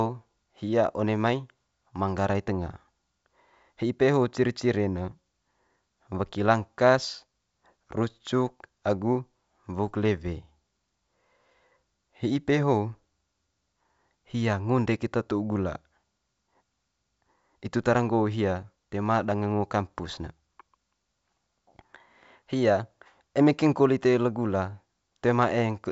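There are no technical faults to describe in time order in this speech, which comes over a G.722 wideband telephone path at 64 kbit/s with nothing above about 7.7 kHz.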